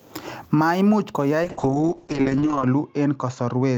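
At 1.44 s a call bitrate drop begins. Bitrate falls from 32 to 6 kbps and bandwidth to 8 kHz. Speech sounds muffled and rough.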